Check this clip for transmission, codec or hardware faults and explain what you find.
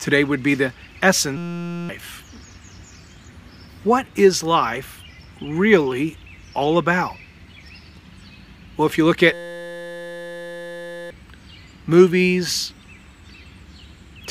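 Two system hang loops occur, at 1.37 to 1.89 s and 9.33 to 11.11 s. The hardware kept replaying one 5.8 ms buffer, which fits 256 samples. Each stretch is a steady 172 Hz buzz, and the second is longer.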